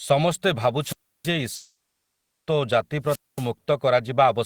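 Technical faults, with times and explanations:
0.80 to 1.31 s and 3.03 to 3.50 s, wireless microphone squelch dropout: hiss swells as the radio signal fades, then the receiver mutes for about 0.32 s and 0.23 s before the sound returns.
1.55 to 2.49 s, long network dropout: the last sound smears into a fading buzz, then about 0.7 s of near silence. This is likely a stream interruption, with roughly 0.9 s of audio never played.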